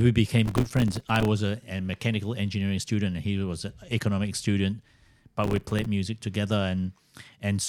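From 0.46 to 1.28 s, just before "a a mechanical engineering", the speech is overlaid with a burst of processor overload crackle. The processor is missing its deadlines for very short buffers, around 3 ms each, and each miss drops in a hard-edged gap of silence. Dozens of these in quick succession give a gritty tearing texture. The same crackle comes back from 5.44 to 5.85 s. It differs from a single dropout because the fine, rapid gaps bunch together and then stop.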